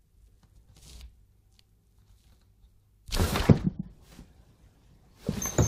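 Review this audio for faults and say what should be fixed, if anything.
Nothing to fix: no faults are audible in this recording of sounds.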